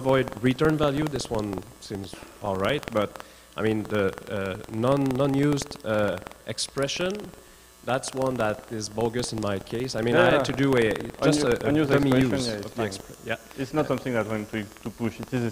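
Buffer tearing runs throughout. Reader and writer have slipped, splicing a small slice of audio from a fraction of a second earlier into each buffer, giving a 21.5 Hz rattle that fits a 2048-sample buffer.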